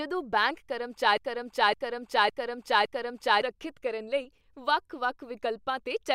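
Speech, with a broken-record loop from 1.18 s to 3.42 s: a 0.56 s fragment repeats exactly four times back to back before "ਕਰਨ ਲਈ". The likely cause is a stalled player or stream resending its last held fragment, losing the audio meant for that span.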